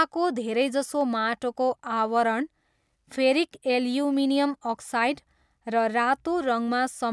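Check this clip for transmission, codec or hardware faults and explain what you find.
No faults can be heard anywhere in the recording.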